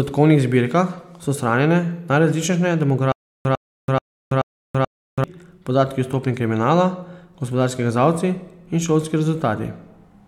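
Stutter with silent gaps, 3.12 to 5.24 s: one 100 ms fragment replays five times between 330 ms silences, likely a stalled stream retrying.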